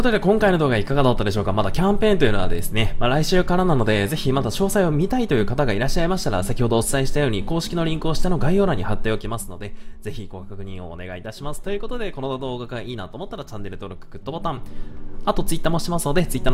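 From 8.98 to 9.61 s, and again from 14.2 to 15.13 s, there's zipper noise: the level drops by around 10 dB, then climbs about 10 dB, in unsmoothed steps, roughly 20 to 30 a second, ticking audibly.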